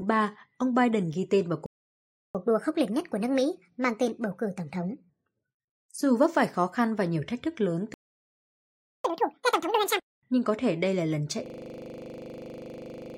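At 1.66 s the speech cuts out for 0.69 s, a playback stall, likely the player running out of data. It resumes at 2.35 s in a catch-up at higher speed, running at 1.25x with pitch raised about 4 semitones until 5.09 s.

A second stall silences the audio from 7.94 s for 1.10 s, likely from the same starved or blocked output. The catch-up that follows, from 9.04 s to 10.15 s, is harsher at 2x speed, with pitch up about 10 semitones.

From 11.46 s to the end, a system hang loop repeats one 40 ms slice of audio over and over. The computer or driver has frozen while the hardware keeps cycling that buffer, giving a rigid 25 Hz buzzing stutter.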